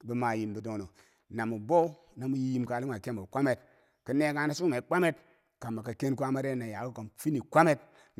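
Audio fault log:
No faults are heard in this speech recording. Nothing in it calls for an entry in the log.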